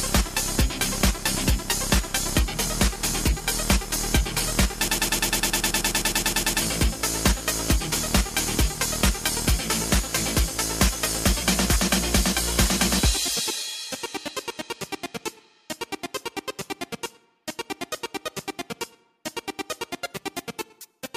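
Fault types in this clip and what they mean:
Broken-record loop: a 103 ms fragment repeats 17 times, 4.88–6.62 s, likely from a stalled playback buffer; waveform shows identical tiled blocks, spectrogram evenly spaced vertical stripes.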